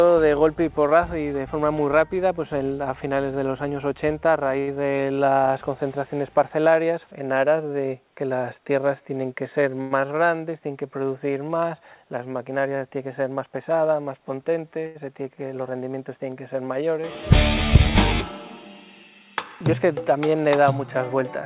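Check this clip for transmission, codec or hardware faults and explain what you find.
Three kinds of fault come through, clustered between 4.6 and 15 s. The band-limited character, with nothing above 4 kHz, fits a narrowband call path such as G.711 mu-law.

Short stall from a late packet, at 4.6 s, 9.81 s and 14.86 s. A packet arrived after its playout time, so the jitter buffer ran dry and the receiver stretched the last sound by about 72, 98 and 88 ms before resuming where it left off. Each point sounds briefly held, with a faint buzz or dip.

Short concealed packet loss, at 4.75 s. About 20 ms never reached the decoder in time, and the receiver papered over the gap by extending what came before, then blending back. It comes across as a quick smear or wobble just after the first stall.

Jitter buffer speed-up, from 13.08 to 13.71 s. With too much audio queued, the receiver trimmed repeated pitch-period-sized slices, roughly 70 ms in all, playing at about 108% speed. 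The pitch holds steady but the passage sounds slightly rushed.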